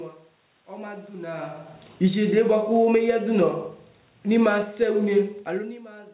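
At 1.89 s the automatic gain falling begins. The control judged the input too loud, or its background noise too strong, and lowered its gain by about 10 dB until 3.14 s. Speech and room noise sink together. From 2.47 s to 3.76 s automatic gain rising overlaps it. Gain climbs about 5 dB, and voice and background swell as one. A second fall starts at 3.72 s and runs to 6.1 s, taking off about 6 dB. Within it, from 4.79 s to 5.37 s, the input drops by about 24 dB. The gain rises about 6 dB in response, so it wins back only part of the lost level.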